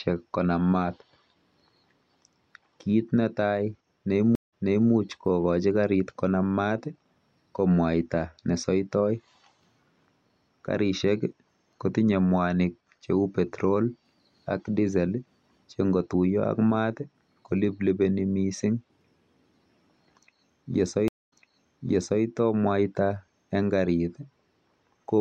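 At 4.35 s and again at 21.08 s the speech suffers a stream reconnect. The connection drops, playback goes silent for 168 ms and then 234 ms, and a fresh decoder picks up from a resent burst, so the speech restarts 392 ms and then 914 ms earlier and repeats what just played. The waveform shows a flat gap followed by a soft fade-in, and a spectrogram shows a blank column followed by duplicated patterns.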